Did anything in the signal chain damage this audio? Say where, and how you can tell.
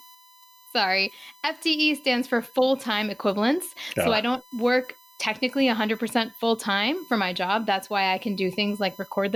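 Yes: USB whine in the analogue wiring, a steady 1 kHz tone roughly 30 dB below the speech throughout, from 1 ms bus frames leaking through power or ground, unlike mains hum at 50 or 60 Hz.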